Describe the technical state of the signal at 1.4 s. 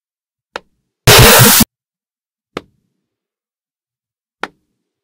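At 1.4 s the sound turns into a loud, harsh, near-square buzz at an almost constant level from 1.07 to 1.63 s, likely float read as integer: 32-bit float samples interpreted as 32-bit integers.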